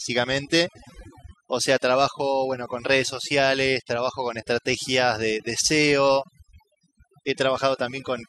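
From start to finish the speech carries overdone noise removal: an aggressive noise reducer has pushed bands near its noise estimate down or out, taking quiet speech detail too. Gaps fall to near silence with twinkling specks, and a spectrogram shows scattered isolated dots between patchy, hollowed-out speech energy.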